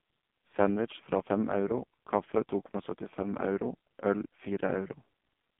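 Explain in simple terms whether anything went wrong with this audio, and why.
AMR narrowband mobile codec damage runs through the whole clip, from start to finish. The speech was squeezed through an old-style phone codec that keeps only about 150 Hz to 3.5 kHz. It rebuilds the voice from a simple model, so it sounds muffled, buzzy and synthetic.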